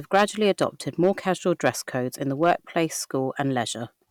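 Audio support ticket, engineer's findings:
Gain stage ahead of the converter overdriven on speech peaks; hard clipping, tops cut flat. Worst at 0.14–0.65 s, about 7 dB over, giving harsh fuzz across that stretch. Shorter bursts at 1.03–1.10 s (about 3 dB), 1.65–1.69 s (about 4 dB) and 2.43–2.53 s (about 4 dB), heard as crackle on the loud syllables. Flattened peaks add high harmonics. Probable fix: reduce input gain or add headroom before conversion.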